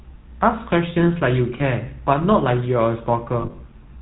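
Throughout, the speech has a buzzy, gravelly roughness with a dull top end, consistent with the GSM full-rate codec. That roughness is plainly audible and fits its 13 kbps coding. It models the vocal tract and drives the model with a sparse, regularly spaced pulse train, keeping only one excitation sample in three, so fine detail is replaced by a coarse buzz. Nothing above 4 kHz survives.

From 1.58 to 1.61 s the sound briefly freezes into a short metallic ring, about 20 ms of lost GSM frames. The decoder filled the gap by reusing the last good frame's parameters. Between 3.42 and 3.59 s the ringing returns in several stuttering patches: about 100 ms of lost frames scattered across 160 ms, the longest run around 40 ms. Each gap is held as repeated frames.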